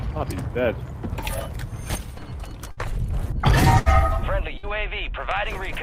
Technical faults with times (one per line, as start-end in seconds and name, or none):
2.71-2.80 burst of packet loss
3.79-3.89 burst of packet loss
4.58-4.66 burst of packet loss